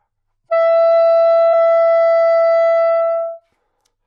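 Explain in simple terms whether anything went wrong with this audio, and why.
Damaged data in a compressed stream causes a brief blip at about 1.52 s. Audio like this is stored in a squeezed, compressed form that has to be unpacked as it plays. At that moment a small piece of the stored data was corrupted, so the decoder couldn't make sense of it and produced a short glitchy sound before finding its place again and carrying on.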